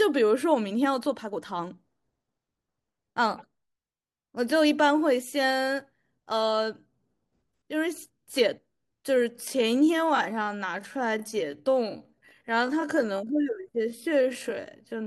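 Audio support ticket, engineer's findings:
Time-stretched section, 9.29 s to end of clip (15.06 s). Speech abruptly slows to about 0.63x pace, pitch unchanged; delivery drags. Likely cause: length-fitting time-stretch in editing/export, repeating short segments to preserve pitch. Spectrogram: formant and harmonic spacing constant, but features elongated horizontally. Waveform: stretched envelopes, repeated grain patterns.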